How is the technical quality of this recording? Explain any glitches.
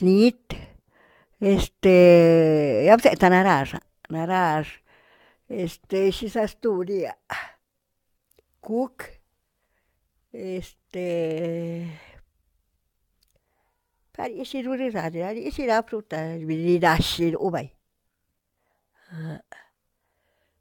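The technical quality is compromised for the whole recording by one persistent fault, generation loss. It runs from start to finish rather than at particular moments. The speech sounds swirly, smeared and hollow. Consonant attacks are blurred, and nothing is present above 17 kHz. The likely cause is repeated lossy encoding, around four passes, which fits an AAC-LC chain at 96 kbit/s. Each re-encode quantises on a shifted frame grid. Noise and spectral gaps stack up beyond what one pass at that rate would leave.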